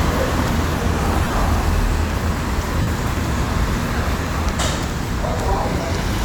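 From 1.22 to 1.33 s, then 2.82 to 2.87 s, lost LE Audio frames: the LC3 decoder refilled gaps with the last spectrum, signs randomised, so detail smears into noise. A spectrogram shows blurred, patchy bands, runs up to around 30 ms, amid the first 105 ms.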